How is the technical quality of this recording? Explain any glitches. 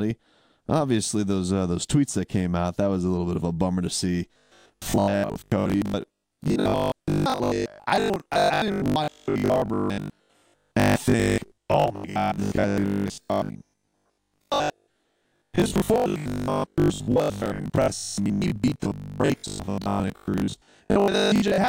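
The recording is clean for its first four seconds, then degrades. From 4.34 s to 21.68 s the speech takes on robotic sound from repeated short buffers, likely because new audio arrives too slowly and the playback side keeps recycling the most recent 20 ms chunk while real audio is dropped, roughly 70 percent of the time. That constant repetition imposes a rigid 50 Hz metallic buzz. Unlike a pitch shift, the buzz stays fixed instead of tracking intonation.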